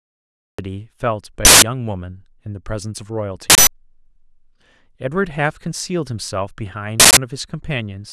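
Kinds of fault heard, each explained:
Cut-off start: Capture or streaming began late, so the first part of the speech never reached the recording. The clip opens on digital silence until 0.59 s and then drops straight into speech already under way, with no natural attack or fade-in, so the first sound arrives abruptly, clipped off mid-utterance rather than starting from a breath or onset.
Uninitialised buffer: Blocks of audio were sent to playback before any real samples had been written into them, so whatever stale values sat in memory were played instead. This produces three short bursts of harsh digital noise, at 1.45 s, 3.50 s and 7.00 s, each lasting about 0.17 s, which fits a 4096-sample block. Each burst briefly replaces the audio.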